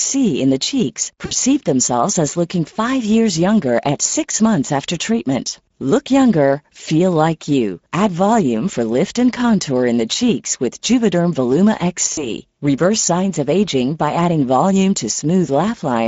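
Throughout, the Speex codec's damage is plainly audible. The speech sounds hoarse and noisy, fitting a CELP coder at around 16.8 kbps starving its excitation. On a spectrogram, the harmonics look smeared and grainy.

At 1.25 to 1.33 s, between "in the cheeks" and "themselves as", VoIP packet loss concealed by the speech codec replaces about 60 ms, fitting three 20 ms frames. The decoder repeats its last pitch and filter with falling gain, so the sound is stretched and fades; the waveform shows a repetitive, shrinking envelope.

At 12.13 to 12.33 s, concealment covers a further 40 ms loss, two frames' worth. The stretched sound decays, and distortion lingers afterward as the decoder's state recovers, visible as blurred harmonics past the gap.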